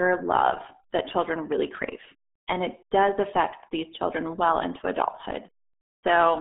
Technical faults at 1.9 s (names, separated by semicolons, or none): RealAudio 14.4 codec